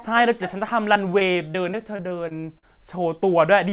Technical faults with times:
0.94-2.64 repeated packet loss (robotic sound)

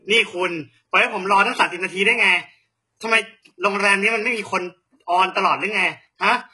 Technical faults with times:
0.00-6.53 HE-AAC compression

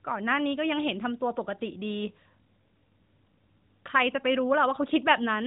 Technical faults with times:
none

